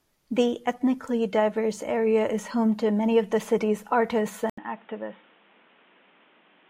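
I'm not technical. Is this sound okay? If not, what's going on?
No. At 4.5 s, after "of the city's artists", the input likely switched to a poorer device. After a brief gap, speech turns muffled, quieter and hissier.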